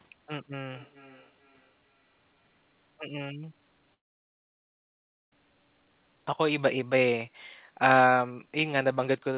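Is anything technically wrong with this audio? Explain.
Yes, two things stand out, heard through a narrowband call path with nothing above 4 kHz, which fits G.711.

From 0.5 to 2.72 s there's feedback echo between two devices. A second device in the room is replaying the call, and this mic picks it up again. Each word returns roughly every 400 ms, getting thinner and ringier, and it's faint, about 30 dB under the speech.

At 3.94 s the audio trails off into a fading buzz or hiss and then silence, coming back at 5.33 s with about 1.4 s simply gone. That's likely a long network dropout: the receiver stretched the last sound out, then had nothing left to play.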